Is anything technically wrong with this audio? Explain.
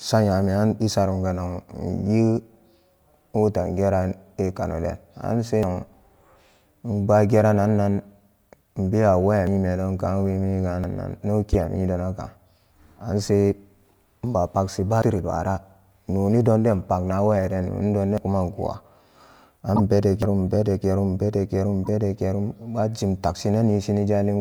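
Yes. Dropped buffers (overrun) at 5.63, 9.47 (between "inbewa waya" and "ka wemi"), 10.84 (after "ka wemi"), 15.02 (after "inba pagshi"), 18.18 and 20.22 s are likely samples overwritten before being read. Each is heard as speech jumping ahead by about a tenth of a second.

Corrupt frames decoded at 11.53 to 11.57, 19.76 to 19.80 and 21.84 to 21.88 s were damaged frames played anyway, putting energy at the wrong frequencies. They are heard as brief glitches, loud at first and softer at 21.84 s.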